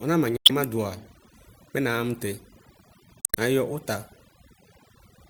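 Overdone noise removal runs through the whole speech clip: a noise reducer set far too hard pulls individual frequency bands down whenever they sit near its noise estimate, so the background collapses into near silence with twinkling specks and the quieter parts of the voice go with them. Damaged data in a compressed stream breaks in at 0.36–0.51 s and again at 3.21–3.37 s, just before "nayɔ ʋta". Corrupted bytes make the decoder misread frames and lose sync while it hunts for the next valid header. The first glitch also inserts about 56 ms of extra time.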